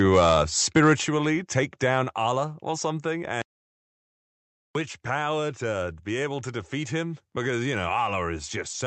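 Speech recorded through a call path, with three distinct faults. From 0.76 to 0.92 s the loudest syllables carry a harsh, crackling edge. That is microphone overload. The peaks push about 2 dB past the converter's ceiling, so their tops are sliced flat. Only a small share of samples are affected. The likely cause is an input volume set too high for the talker. At 1.02 s the level drops abruptly, by about 5 dB. Voice and background fall together, in one step. This is the microphone volume stepped down. Its timing, a tenth of a second after the clipped burst, points to the call software reacting to the overload. It likely cut the device's input gain in a single move rather than fading it. Then, from 3.42 to 4.75 s, the audio cuts to dead silence. This is an audio dropout to silence, 1.33 s long. No room tone or hiss remains in the gap. That points to the input being lost, likely a device or link failure, while the recorder kept writing silence. 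Whatever was said in that stretch is gone. The sound resumes mid-flow with "power to be able". Throughout, the Opus coding leaves nothing above 8 kHz.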